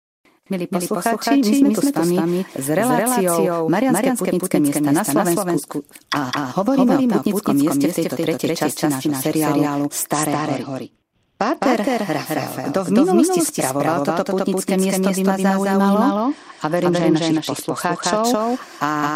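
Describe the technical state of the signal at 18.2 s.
At 18.2 s you're right at the tail of a Bluetooth SBC bit pool drop that runs from 16.08 to 18.24 s. The link got congested, so the phone cut back the bits per frame. The top sub-bands get starved and everything else is quantised coarsely. That's why the treble goes dull and a gritty grain sits on the speech. The loss in detail points to the bit pool falling from around 28 to 10, roughly 84 kbps.

Layered on top of that, and running through the whole clip, is a doubled audio track. A second full-band copy trails the original by roughly a fifth of a second at about the same level. It's dry, with no decay or room colour, so it reads as a flat slapback rather than an echo. The likely cause is the signal being picked up again through a slower path, or an edit leaving two copies out of step.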